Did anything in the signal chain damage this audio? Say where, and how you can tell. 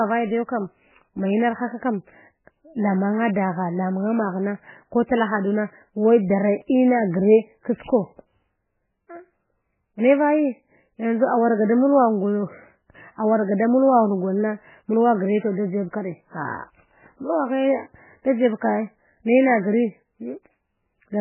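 Yes. MP3 compression damage runs through the whole speech clip, likely introduced at the codec stage. Nothing survives above 3 kHz, and the sound is watery and swirly as weak frequency lines drop in and out between frames, which fits a severely starved bitrate near 8 kbps.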